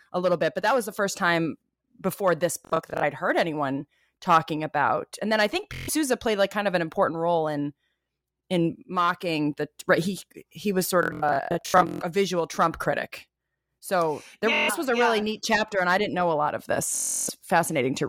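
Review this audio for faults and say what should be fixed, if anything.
Bluetooth stutter occurs at 2.65–3.04 s (after "first time before this", before "heard anyone talking about"), 5.74–5.90 s (after "then I think"), 11.03–12.02 s, 14.54–14.70 s (before "was a yeah really") and 16.95–17.30 s. Packets arrived late or not at all, so the receiver looped its last short buffer, producing a buzzing machine-gun repeat. Speech then resumes further on, skipping the missing stretch. The largest loss is about 650 ms in total across the 11.03 s burst, with its longest single run about 139 ms. To prevent this, keep the source close to the receiver with a clear path and less 2.4 GHz interference, or record over a wired connection.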